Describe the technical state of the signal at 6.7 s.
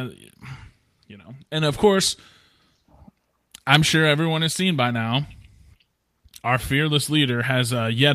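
At 6.7 s the speech signal is intact, with no audible dropout, distortion, glitch or other technical fault.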